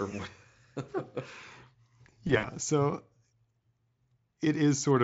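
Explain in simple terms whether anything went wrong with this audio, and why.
Around 2.27 to 2.50 s the speech briefly turns buzzy or noisy, as if a sound were being stretched and fading, and it stays weak for a moment before clearing. This is VoIP packet loss concealed by the speech codec. A few small pieces of the call went missing, totalling about 80 ms over a 160 ms stretch, with the longest gap about 60 ms. The Speex decoder filled each gap by guessing from the sound just before it, letting that guess fade.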